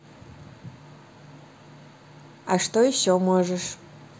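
Nothing in this recording jumps out as a technical fault; there's nothing here to flag at any point.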